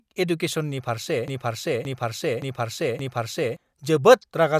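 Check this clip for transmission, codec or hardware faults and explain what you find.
One fault is audible in this speech clip. A broken-record loop runs from 1.28 to 3.57 s, right after "एडुकेसननि फारसे". A 0.57 s fragment plays four times back to back. The speech that belonged there is lost, most likely because a player, encoder or stream stalled and kept resending its last buffered piece.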